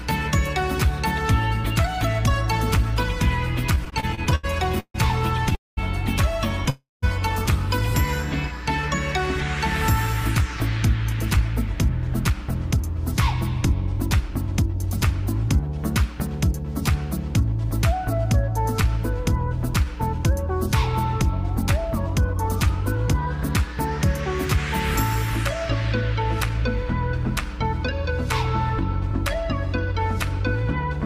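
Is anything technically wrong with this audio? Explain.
Yes, there are four kinds of fault.

Mains hum runs through the whole clip: a steady 60 Hz tone about 10 dB below the signal, coupled in from the power line through a ground loop or nearby transformer. Its fixed pitch and constant level, unaffected by what the audio does, separate it from low rumble in the material itself.

Repeated stalls (stutter) affect 3.75 to 6.68 s. Twelve short gaps, the longest 143 ms and totalling 365 ms, occur as late packets repeatedly drain the jitter buffer. The receiver extends the last sound each time, so the audio drags and stutters but nothing is lost. The many brief hitches distinguish it from a single freeze.

A call audio freeze occurs twice. The first, from 5.55 to 5.79 s, holds for 220 ms, with 190 ms of it silent. The second, from 6.70 to 7.04 s, holds for 326 ms, with 180 ms silent. Each time the audio stops, a fading continuation gives way to silence, and then the audio resumes exactly where it left off, most likely because packets were held up in transit. 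Unlike a dropout, nothing is skipped.

A jitter buffer speed-up occurs three times. From 11.77 to 16.75 s the audio runs at 104% speed, removing roughly 200 ms. From 22.19 to 24.58 s it runs at 103%, and from 26.64 to 31.00 s at 102%, each removing about 70 ms. The receiver trims pitch-period slices to reduce excess buffered delay. The result runs slightly faster but, unlike a faster playback rate, the pitch stays the same.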